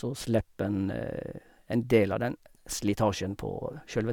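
Speech with no audible faults.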